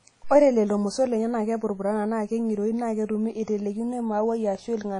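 WMA compression affects the whole speech clip: nothing above 10.1 kHz, and a ringing, washy hiss breathing with the signal, likely from an encode around 32 kbps.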